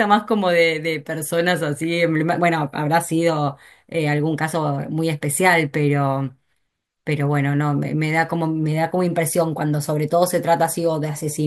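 No technical faults can be heard anywhere in the recording; the signal holds steady throughout, with nothing to interrupt or disturb it.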